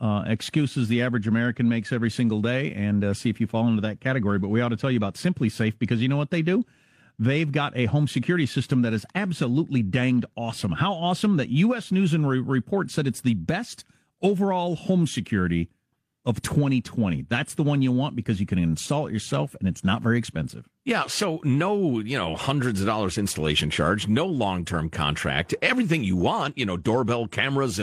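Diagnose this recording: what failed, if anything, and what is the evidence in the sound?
Nothing failed: the sound gives no evidence of a fault at any stage of this recording.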